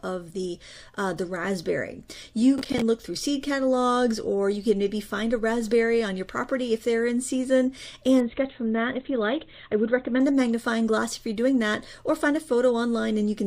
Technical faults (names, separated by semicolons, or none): processor overload crackle; adaptive stream at a lower bitrate